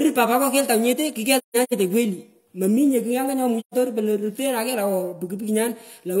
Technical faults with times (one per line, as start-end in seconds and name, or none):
1.35-1.73 AAC frame loss with muting
3.59-3.74 AAC frame loss with muting